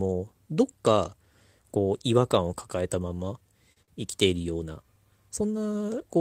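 Three short stalls from a late packet occur at 3.72 to 3.78 s, 3.82 to 3.90 s and 4.42 to 4.46 s. Each time the jitter buffer ran dry, so the receiver held the current sound for 40, 53 and 23 ms, producing a brief drawn-out, faintly buzzy hold before playback resumed with nothing lost.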